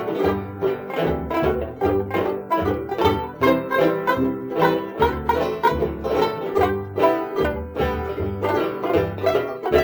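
Throughout the music, a crude rate conversion stepped the sample rate up by 3:2 by repeating nearest samples, consistent with 32 kHz to 48 kHz, without filtering. The patterned error, roughly 30 dB below the music, adds a gritty, inharmonic fizz that follows loud, bright passages.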